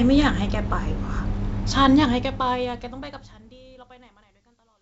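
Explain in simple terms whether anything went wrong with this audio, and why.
Nothing has gone wrong with this speech recording: the wideband telephone coding leaves it clear with at most a faint trace of processing, and the gentle fade-out that begins around the two-second mark and runs to the end is a normal edit.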